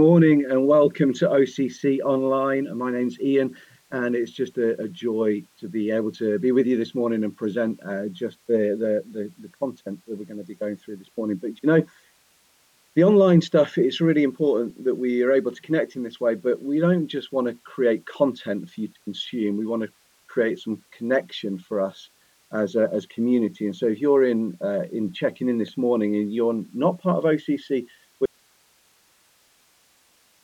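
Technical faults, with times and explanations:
28.26 s to end: audio dropout to a faint residue. The sound stops abruptly, leaving only hiss about 40 dB down, likely from a path that stayed live after losing its source. The waveform shrinks to a thin flat band, and the spectrogram turns to even, faint noise.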